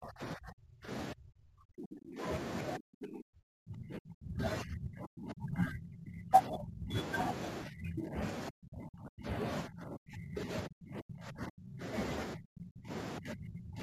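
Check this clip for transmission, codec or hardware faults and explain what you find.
Two faults are present: the speech repeatedly sinks or breaks up through most of the clip, and a fine roughness sits on it throughout.

Speech suppressed in double talk occurs from 0.0 to 2.21 s, 2.78 to 6.96 s, 7.63 to 11.83 s, and 12.35 s to the end. This is likely the call's echo canceller failing to tell the near talker from loudspeaker echo while both sides spoke, so it turned everything down. The speech dips by as much as about 40 dB in the first two spans and about 35 dB in the last two, dulling and dropping out in fragments.

Sample clock jitter runs through the whole clip. The converter's clock wandered by something around 10 µs, so each sample was taken slightly early or late. The resulting error is largest where the waveform changes fastest and sits at about 25 dB below the signal. It is heard as a hiss-like grit that swells on loud and sharp speech sounds and disappears in the gaps. 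The call's microphone processing, which leaves nothing above 8 kHz, is not at fault.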